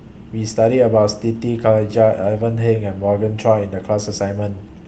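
No technical faults can be heard anywhere in the recording. There are no events here to place in time.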